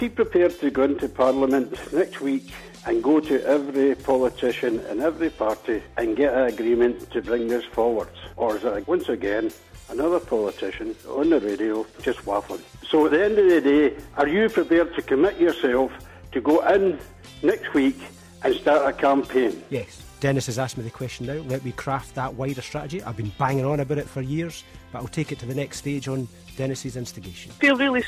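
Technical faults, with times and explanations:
No technical faults heard.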